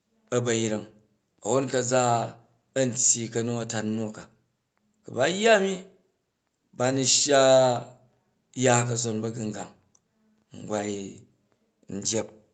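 Nothing faulty can be heard anywhere in this speech.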